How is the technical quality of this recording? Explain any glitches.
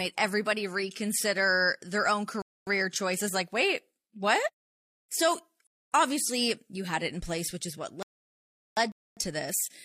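The recording has two kinds of playback fault in the speech: repeated gaps between chunks and one rebuffering stall.

Gaps between chunks occur at 2.42 to 2.67 s, 5.67 to 5.92 s and 8.92 to 9.17 s, each 250 ms long and recurring every 3 s of audio. Silence is inserted at each chunk join, so the sound is interrupted by short holes at each join, but nothing is lost.

A rebuffering stall runs from 8.03 to 8.77 s. The player exhausted its downloaded audio and halted until more data arrived, adding 0.74 s of silence. The speech then picks up exactly where it stopped.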